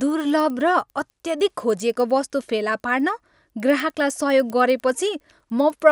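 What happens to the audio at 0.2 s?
At 0.2 s the speech carries one of a steady train of faint ticks, ten per second, heard whenever sound is present. Throughout the clip, a resampler restarted on every block converts 24 kHz to 48 kHz in 100 ms blocks, so each block edge, including this one, gets a small discontinuity.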